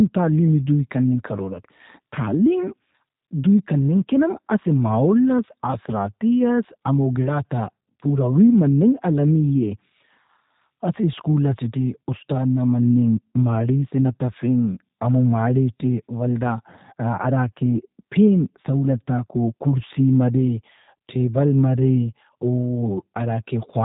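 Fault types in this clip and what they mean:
G.729 codec: The speech passed through a low-rate VoIP codec that rebuilds each frame from a vocal tract model, a pitch predictor and a few pulses, consistent with G.729A at 8 kbit/s. Nothing above 3.8 kHz remains, and the voice sounds plainly rough and synthetic.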